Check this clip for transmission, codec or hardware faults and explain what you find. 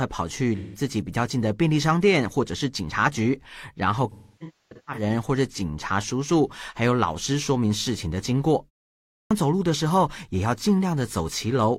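Two kinds of fault are audible: AAC frame loss with concealment in two places, and a clipped start after a pause.

AAC frame loss with concealment: From 0.56 to 0.80 s the speech turns briefly smeared and phasey. About 170 ms is missing, which fits four lost frames. The decoder rebuilt the gap from the last good spectrum with randomised phase, so it sounds blurred rather than silent.

The same fault returns from 4.11 to 5.02 s, and here it is heavier. About 725 ms is lost across roughly 850 ms. The longest stretch is about 0.3 s.

Clipped start after a pause: At 9.11 s the speech begins abruptly out of a half-second silence, with its opening sounds missing. About 200 ms is swallowed up to 9.31 s. The output device likely dozed during the pause and needed that time to wake and lock again.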